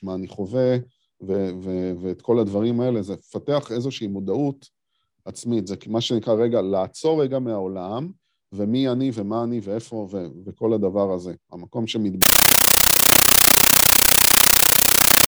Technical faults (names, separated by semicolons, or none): compressed stream played as audio